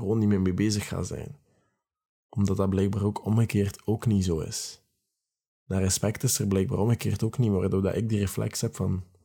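A speech recording, and nothing is technically wrong with it.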